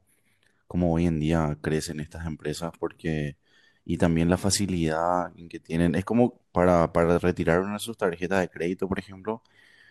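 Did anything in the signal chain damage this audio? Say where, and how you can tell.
No, nothing along the way seems to have damaged this speech, since there's no sign of trouble from any stage of the chain.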